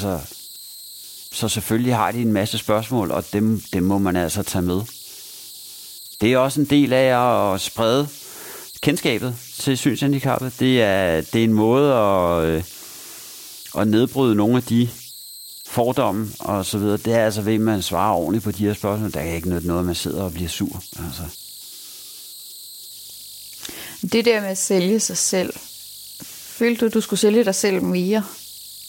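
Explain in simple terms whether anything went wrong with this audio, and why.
Something did go wrong, and it lasts the whole clip. The fault is converter idle tones. A high whistle sits under the speech, somewhere around 4 kHz. It stands out most in the pauses between phrases. During quieter speech it turns into a grainy hiss. This happens when the part that turns sound into digital data gets a very small signal and falls into a repeating pattern. That pattern makes its own steady tone.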